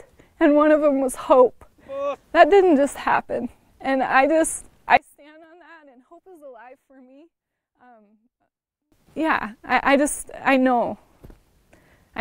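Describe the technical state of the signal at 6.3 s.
At 6.3 s the audio sits inside a sharp level collapse lasting from 4.97 to 8.92 s. The sound drops by about 30 dB, background included, and what remains is only a small residue. The likely cause is one channel inverted. One stereo channel had its polarity reversed, so everything shared by both channels cancelled when they were summed to mono. Only the difference between the two channels survives.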